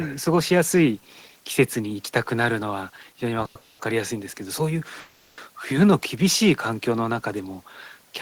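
Call audio freezes interrupt the speech at 3.45 to 3.56 s, 3.58 to 3.80 s and 5.00 to 5.39 s. Each holds the last sound as a fading buzz, lasting 100, 210 and 380 ms. Late packets likely emptied the jitter buffer. Speech then resumes where it stopped, later but intact.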